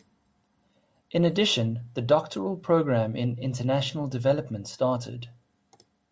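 No technical faults are audible.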